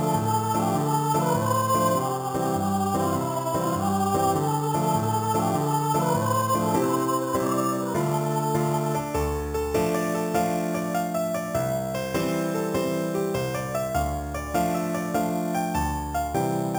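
From start to finish there's imaging from sample-and-hold upsampling. Audio at 8 kHz was raised to 48 kHz by just repeating samples, so mirror images land from 4 to 8 kHz, about 17 dB under the signal, giving a metallic fizz that tracks the sound's level.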